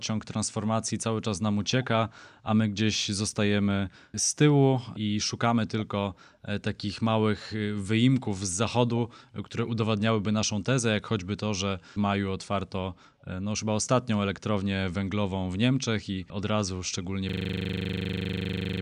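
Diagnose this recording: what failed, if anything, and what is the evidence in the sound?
After "i od razu szczególnie", from 17.29 s to the end, the audio collapses into a steady 25 Hz buzz. That is a system hang loop at the driver or buffer stage: the system froze while the hardware replayed one 40 ms ring-buffer segment repeatedly.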